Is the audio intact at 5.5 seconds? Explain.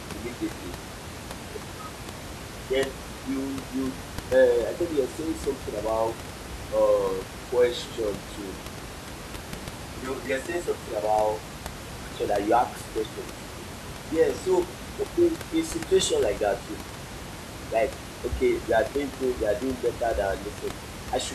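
Yes, the speech at 5.5 s is intact, with only the room's own background noise, sitting about 12 dB below the speech, audible underneath it.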